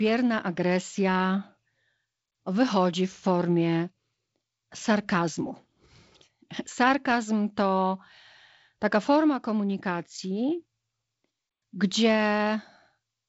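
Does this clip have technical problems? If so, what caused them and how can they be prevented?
No, nothing to fix or prevent here: the speech is carried by G.722 wideband telephone coding at 48 kbit/s, with content stopping at about 7.7 kHz and a light hiss in the upper band.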